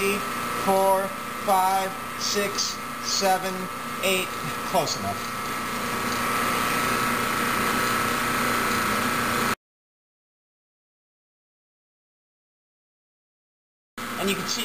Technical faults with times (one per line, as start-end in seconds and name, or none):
none